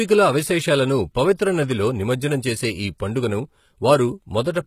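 Throughout, s sounds turn gritty and lispy over a metallic treble, likely HE-AAC compression rebuilding the top band from copied lower bands, which fits about 20 kbps.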